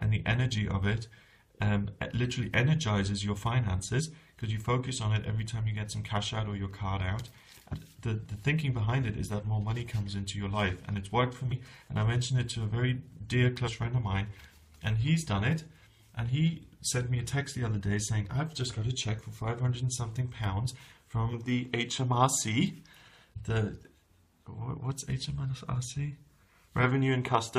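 At 3.98 to 4.01 s and again at 7.72 to 7.74 s, damaged data in a compressed stream breaks the audio for about 22 ms each time. Bytes in the compressed file or stream were corrupted, so the decoder misreads or discards the affected frames, loses sync and hunts for the next frame header. Each event sounds as a chirp, squawk, click or brief hole. On a spectrogram and waveform, each shows as a narrow vertical disturbance or gap breaking the surrounding texture.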